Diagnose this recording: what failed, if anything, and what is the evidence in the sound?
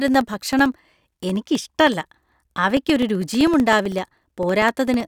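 Periodic USB or driver dropouts in the driver stage. Every 64 ms, from 0.08 to 5.0 s, a blocked bus silences about a millisecond, ticking.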